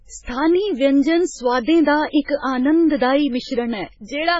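Throughout, the sound is watery and swirling, with a hard ceiling at 7.6 kHz and heavy smearing, likely from MP3 compression at a very low bitrate, around 16 kbps. Starved of bits, the encoder dropped the treble and let weak frequency components flicker between frames. From 2.22 to 2.28 s, a short hiss runs about 59 ms ahead of a sharp attack, which then sounds blurred. This is pre-echo: the codec spread its noise across the whole block, filling the quiet moment before the onset.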